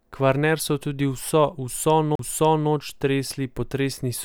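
A CD skip at 2.15 to 2.19 s, right after "so tudi vso": the laser jumps tracks, so the speech mutes for about 40 ms and resumes elsewhere.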